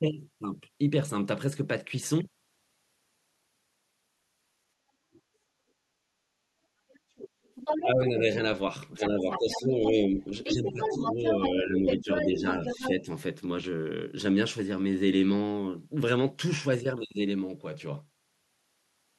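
A faint scrap of a second voice, the other side's voice leaking through, appears at 5.13 to 5.21 s, likely residual loudspeaker echo the echo canceller missed. Louder leakage, nearly as strong as the talker, follows at 6.92 to 8.1 s, 8.96 to 9.92 s, 10.44 to 11.49 s and 11.87 to 12.9 s. During these overlaps, speech suppressed in double talk makes the talker dip by about 10 dB at 7.82 to 8.2 s, 8.99 to 10.19 s and 10.53 to 13.09 s, likely the canceller attenuating both voices at once.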